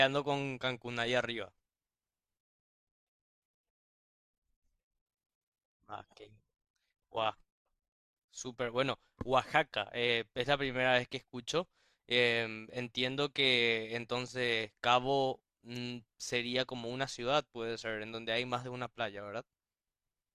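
Nothing stood out as a technical fault on listening to the speech recording.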